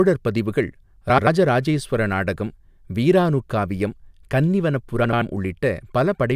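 At 1.09–1.27 s and 5.04–5.22 s, frames out of order: two neighbouring 85 ms blocks, likely four frames each, play swapped, giving garbled flutter. Spectrograms show abrupt vertical seams at three joins.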